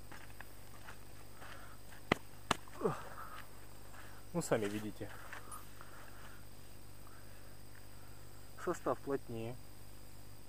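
No technical faults can be heard anywhere in the clip. At no point does anything in the recording or playback chain draw attention to itself.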